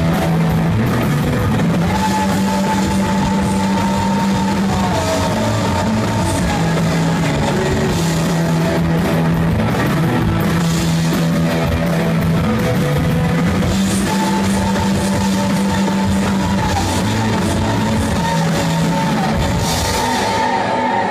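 No technical faults can be heard anywhere in the audio.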